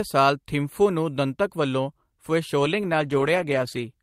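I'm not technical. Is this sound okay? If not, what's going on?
No. From about 2.64 seconds until 3.97 seconds, near the end, the speech turns rough and muffled, losing its crispness for over a second. This is a call bitrate drop: the connection judged that less data could get through, so the call software squeezed the audio much harder. With so little data to work with, it kept only a coarse version of the sound and dropped the brighter, high-pitched detail.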